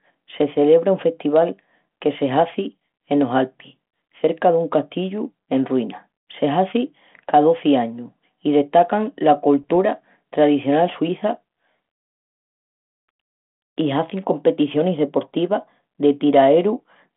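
From 9.62 to 9.71 s, bit errors on an ADPCM link turn the speech into pops and a rough burst with brief level jumps. Each flipped bit derails the decoder's step size and predictor, so the damage rings on. Unlike packet loss, nothing drops to silence.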